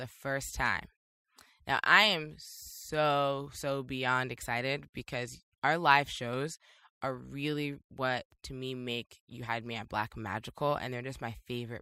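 No technical faults can be heard anywhere in the recording. The speech continues without any audible break or disturbance in the signal.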